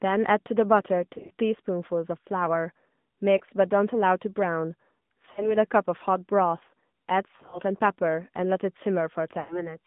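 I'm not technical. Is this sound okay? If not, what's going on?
No. Two things are wrong, and both come from a mobile phone link.

The whole clip has the sound of the AMR narrowband mobile codec, the system older phone networks use to squeeze speech down. It keeps only a narrow slice of sound, roughly 150 to 3600 Hz, so nothing bright or airy remains. The speech sounds thin, boxy and plainly buzzy and artificial. Unlike a bad microphone, this tone comes from the speech being rebuilt from a simplified model, and it stays the same for the entire clip.

On top of that come lost AMR speech frames, where pieces of the signal arrived corrupted by radio errors and the phone guessed them by stretching the last good sound and fading it. You hear brief smeared, warbly hiccups at 1.14 to 1.31, 3.38 to 3.42, 5.32 to 5.56, 7.36 to 7.61 and 9.40 to 9.76 seconds. The ones at 1.14 and 7.36 seconds flutter in several quick bits rather than as one gap. 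These come and go, while the codec tone never changes. Unlike a plain dropout, the sound smears and hangs on briefly instead of cutting straight to silence, and it comes back a little weak or rough.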